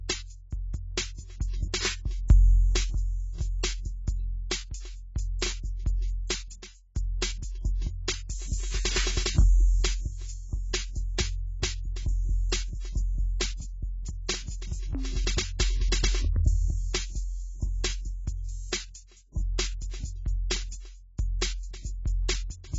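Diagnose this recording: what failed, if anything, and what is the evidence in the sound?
The codec stage failed throughout this music, with heavy AAC compression the likely cause. A spectrogram shows a flat ceiling at 7.7 kHz with patchy, holed bands beneath it, and sustained tones sound dull and warbling. Damage this heavy fits a bitrate near 16 kbps.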